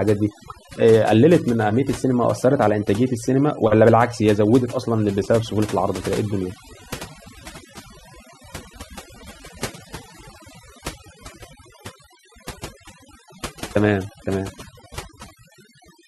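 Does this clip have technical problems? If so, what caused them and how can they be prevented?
Yes: overdone noise removal runs throughout the speech, with bands near the noise estimate pulled down hard, leaving near-silent gaps with twinkling specks. Unlike a noise gate, it flickers within frequencies rather than cutting everything at once. Prevent it by using gentler reduction settings.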